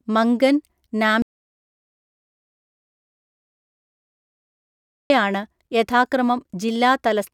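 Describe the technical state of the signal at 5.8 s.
At 5.8 s the speech signal is intact, with no audible fault at that moment.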